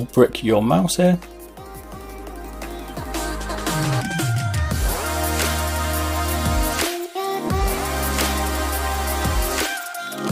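Nothing is technically wrong with the audio in this clip.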